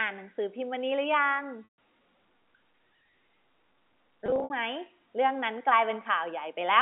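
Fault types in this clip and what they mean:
Packet loss with pitch repetition: at 1.64–1.67 s and 4.26–4.50 s, missing audio is patched by looping the last pitch period, heard as brief buzzy holds.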